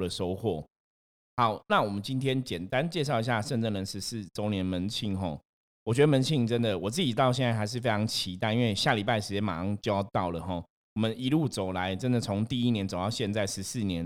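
No technical faults can be heard anywhere in this speech recording. There is nothing to flag at any point in its timeline.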